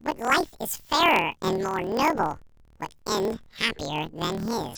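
Planar audio read as interleaved runs throughout the speech. Each 26.12 ms block stores all left samples, then all right, but is read as alternating pairs, so each half plays at double speed. The result sounds an octave high, with a 38.3 Hz flutter.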